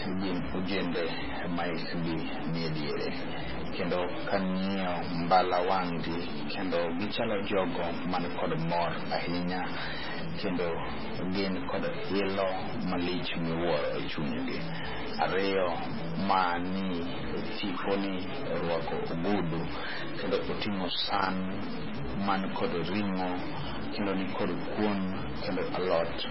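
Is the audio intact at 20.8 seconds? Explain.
No. A worn or dirty contact is making and breaking from 20.22 to 22.01 s, just after "ni orwako ogudu", chopping the signal into an irregular loose connector crackle. Underneath, a data bit is likely stuck at a fixed value, adding distortion in a pattern that follows the waveform. Heavy MP3 compression, likely at a very low bitrate around 16 kbps, cuts everything above 5.5 kHz and leaves the sound watery and swirly with smeared attacks.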